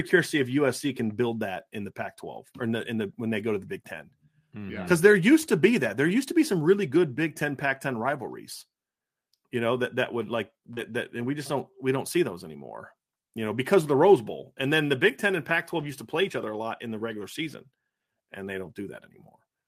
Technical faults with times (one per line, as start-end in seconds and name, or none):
0.87 lost packet rebuilt from error correction
10.73-10.92 short concealed packet loss
10.77-10.79 lost packet rebuilt from error correction
13.46-13.48 lost packet rebuilt from error correction
15.80-15.86 lost packet rebuilt from error correction
18.62-18.72 lost packet rebuilt from error correction